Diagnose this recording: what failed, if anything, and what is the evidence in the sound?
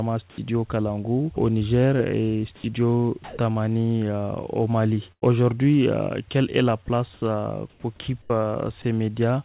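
Call processing: at 0.30–0.38 s and 3.24–3.38 s, the real background gives way to a flat, featureless hiss, about 5 dB quieter the first time and about 3 dB louder the second. This is comfort noise in place of the background, likely from discontinuous transmission filling pauses with synthetic noise.

Call processing: at 2.56–2.64 s, about 60 ms of actual sound vanishes under steady noise, and at 8.82–8.84 s a further 20 ms goes the same way. This is sound dropped by the voice detector, likely because it mistook quiet sound for background and stopped sending.

Network: from 5.12 to 5.24 s the sound freezes into a held, decaying continuation, and roughly 100 ms of material is missing when it resumes. This is a burst of packet loss. The receiver stretched the last good audio while fading it down.

Call processing: between 6.86 and 8.30 s the sound turns choppy. Pieces, about 320 ms in all, are swapped for synthetic fill. 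This is sound chopped by the voice detector, likely from repeated switching between sending and silence. Across all of this, nothing is heard above 4 kHz, consistent with a G.711 A-law call path.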